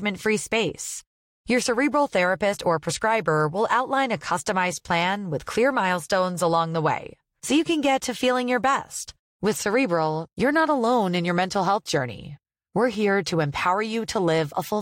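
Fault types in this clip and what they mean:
No faults turn up anywhere in this speech recording, so there's nothing to list here.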